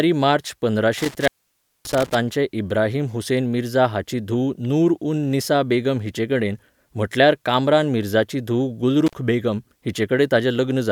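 Around 0.98 to 2.15 s, and again briefly at 9.06 to 9.13 s, an intermittent contact breaks the line for about 576 ms and 47 ms. Crackle marks each break, and faint hiss fills the gap, unlike the clean silence of a digital dropout.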